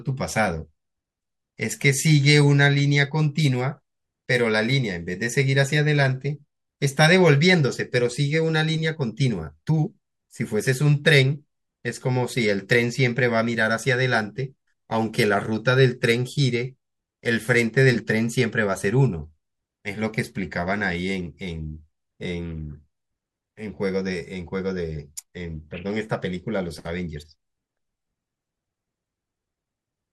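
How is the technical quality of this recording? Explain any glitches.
Nothing stood out on listening to this speech recording, and there are no glitches to explain.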